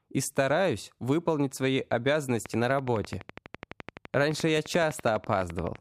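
From 2.46 to 5.77 s, regular ticks at 11.8 per second sit about 10 dB above the speech: a train of clicks, likely interference or a faulty connection or power supply.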